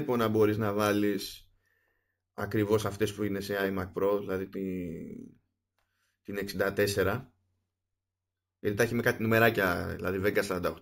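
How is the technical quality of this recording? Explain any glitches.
The recording has a persistent fault across the whole speech clip: imaging from sample-and-hold upsampling. The audio sounds as if it was raised from 16 kHz to 48 kHz by repeating each sample with no smoothing filter. That leaves a mirrored copy of the speech spectrum between 8 kHz and 16 kHz, about 20 dB below the signal. It's heard as a bright metallic fizz that rises and falls with the voice, moving opposite to its pitch. On a spectrogram, the speech harmonics reappear flipped above 8 kHz; zoomed in, the waveform shows small flat steps.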